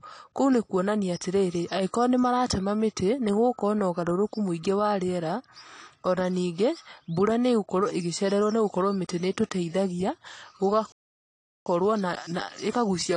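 Throughout the speech, the encoder is short of bits, most likely from AAC compression in its low-complexity form. Quantising each frame's spectrum coarsely against a hearing model lowers the cut-off, which fits a bitrate around 32 kbps. The damage is plainly audible: the speech sounds dull and smeared, sibilants turn fizzy, and sustained sounds take on a warble as spectral detail comes and goes from frame to frame.

At 10.92 s the player stops receiving usable data or its output thread is held up, which is likely a playback stall. Nothing reaches the output until 11.66 s, so the speech simply breaks off mid-flow into 0.74 s of silence, long enough to register as a hang rather than a natural pause, before it resumes.

From 11.66 s to the end of the clip, the player works off the backlog the stall left behind with time-compressed catch-up. It removes small slices of audio and cross-fades across the joins, running the speech at 1.15 times normal speed. 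Pitch stays where it should, so the talking sounds hurried rather than chipmunk-like.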